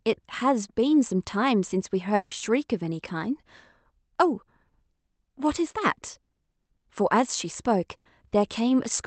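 A long network dropout, likely, runs from 2.15 to 2.33 s: about 160 ms of speech never arrives, and the receiver fills the whole gap by extending the last sound into a fading buzz or hiss, with no full silence, before the speech resumes with that stretch missing.

A burst of packet loss follows at 7.97 to 8.07 s. Roughly 80 ms of audio is lost or late, so the decoder carries the preceding sound forward and lowers it through the gap, and the speech picks up again slightly further on, the loss heard against Opus call audio limited to about 8 kHz.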